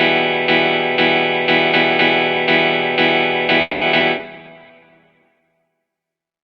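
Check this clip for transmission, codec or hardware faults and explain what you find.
Four kinds of network-related fault turn up, all clustered between about 3.6 s and 5.8 s.

A call audio freeze runs from 3.61 to 3.84 s. The sound stalls and is carried on by a fading tail for about 200 ms, with roughly 10 ms of true silence. This is likely held-up packets draining the jitter buffer. Unlike a skip, the audio resumes exactly where it stopped, so nothing is lost, only delayed.

Two skip-ahead events follow, at 3.99 to 4.03 s and 4.18 to 4.22 s. Each time, playback jumps forward with almost no gap, dropping roughly 70 ms of audio while the buffer sheds about 50 ms of excess delay. The giveaway is an abrupt splice with content missing, not a pause.

A call bitrate drop covers 4.25 to 5.79 s. The encoder falls from 128 kbps to 11 kbps and stays at the floor for 1.36 s, while the top end narrows from 20 kHz to 12 kHz. 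The sound turns coarse and watery, and the roughness, not just dullness, separates it from a muffled microphone.

A jitter buffer slow-down sits at 4.36 to 4.88 s, inside that bitrate dip. Repeated pitch periods add 98 ms, so the audio plays at 83% speed. The pitch does not drop, and the sound is drawn out rather than halted, which is what distinguishes it from the earlier freeze.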